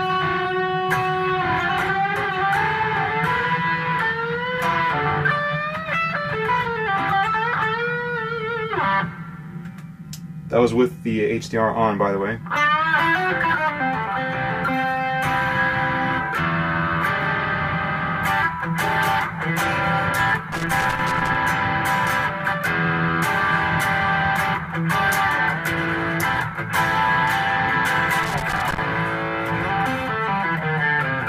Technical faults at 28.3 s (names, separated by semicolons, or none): loose connector crackle